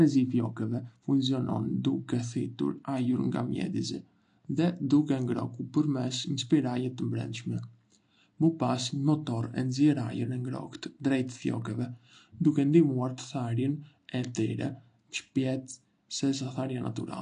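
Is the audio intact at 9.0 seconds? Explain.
No, at 9.0 seconds, as throughout the clip, there is plainly audible AAC compression damage, likely from AAC-LC at a low bitrate around 32 kbps. Nothing survives above 9.8 kHz, and coarse quantisation leaves the speech dull and smeared, with fizzy, warbling sibilants.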